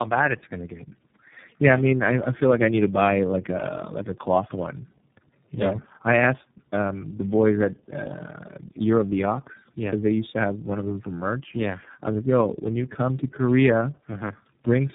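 Tandem speech coding runs through the whole clip. The speech has passed through three low-rate speech coders in turn, which fits a chain of G.723.1, G.729A and iLBC. Each one re-encoded the last one's damage. The speech sounds rough, muffled and warbly, with nothing above 3.8 kHz.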